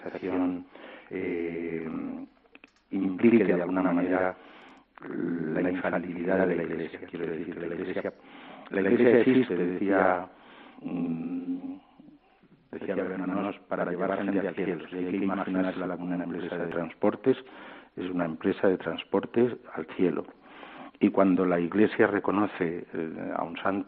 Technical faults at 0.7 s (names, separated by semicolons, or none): channel delay (doubling)